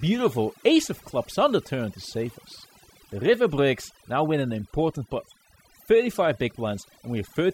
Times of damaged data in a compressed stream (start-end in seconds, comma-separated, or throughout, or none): none